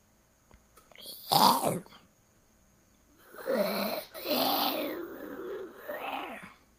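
From 4.03 to 4.17 s the sound stalls in a call audio freeze: the last sound is carried on as a fading buzz for about 110 ms, likely because delayed packets emptied the jitter buffer. Unlike a dropout, nothing is lost; the audio resumes where it stopped, 110 ms later.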